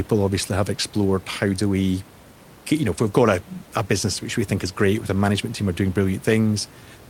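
A speech recording with no technical faults to report.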